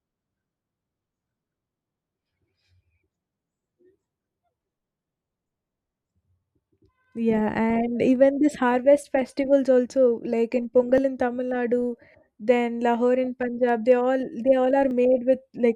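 Speech with clock drift buffer slips: about four regular clicks, one every 3.94 s from 3.10 s to 14.91 s, likely from two mismatched device clocks dropping or repeating a few dozen samples.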